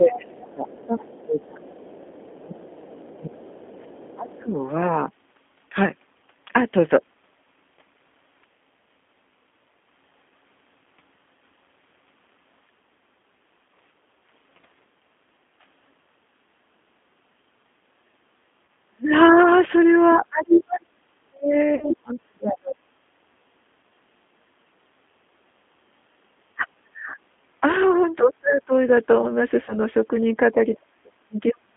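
G.729 codec throughout: the whole clip is squeezed into a band of 200 Hz to 3.5 kHz at 8 kbit/s, and the rebuilt speech sounds plainly rough and synthetic.

Speech suppressed in double talk, 0.0 to 4.55 s: the talker repeatedly dips, at worst by around 25 dB, for most of this stretch, likely because an echo canceller was ducking both sides at once.

Other side's voice leaking through, 0.13 to 4.43 s: a faint second voice sits far below the talker, likely loudspeaker echo the canceller failed to remove.

Background gated by the echo canceller, 13.58 to 14.06 s: the room sound briefly drops by about 7 dB for roughly a tenth of a second, then recovers.

Speech suppressed in double talk, 17.89 to 22.77 s: the talker fades and cuts out in pieces for about three seconds, plunging by around 40 dB at worst.

VoIP packet loss concealed by the speech codec, 18.65 to 18.68 s: 30 ms of sound is replaced by a short fading extrapolation, which fits one lost packet.

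Other side's voice leaking through, 20.09 to 22.19 s: the second voice is now clearly audible, only around 10 dB under the talker.

VoIP packet loss concealed by the speech codec, 21.75 to 21.88 s: 60 ms is lost, which fits two packets. The decoder stretches the last sound out and fades it, and the voice stays weak briefly afterward.

Speech suppressed in double talk, 26.55 to 28.72 s: the voice drops away for about a second in total, by around 30 dB at its deepest.

VoIP packet loss concealed by the speech codec, 29.65 to 29.75 s: 30 ms is lost, which fits one packet, and a fading extrapolation covers the gap.

Speech suppressed in double talk, 30.52 s to the end: the talker is again cut down for about a second, falling by around 40 dB.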